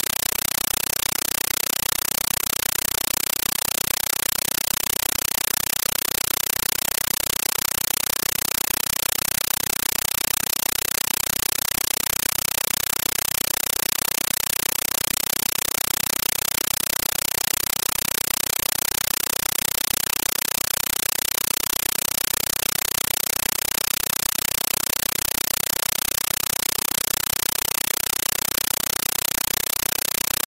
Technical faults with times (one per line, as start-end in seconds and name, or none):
0.00-30.48 compressed stream played as audio